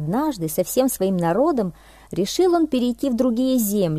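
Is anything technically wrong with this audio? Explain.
No, nothing technically wrong can be heard in this audio; the signal stays steady and intact throughout, with no audible disruption at any point.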